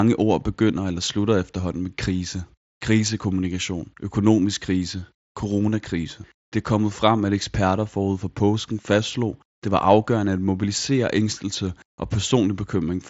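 Nothing goes wrong here; it's just speech coming over a Bluetooth headset's mSBC link, topping out around 7.7 kHz the way that wideband codec does.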